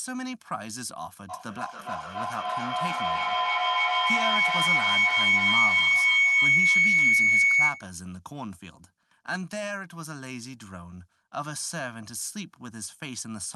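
From 1.29 to 7.96 s there's a feedback howl: a mic-to-speaker loop gaining on each trip, building to a whine around 2 kHz, peaking about 12 dB over the speech, with the repeats roughly 0.3 s apart.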